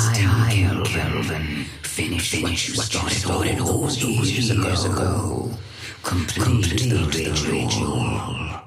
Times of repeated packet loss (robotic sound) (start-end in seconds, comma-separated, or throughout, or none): none